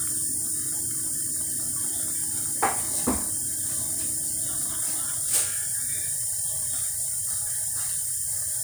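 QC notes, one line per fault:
No technical faults are present in this recording of sounds; the signal is continuous from its first moment to its last.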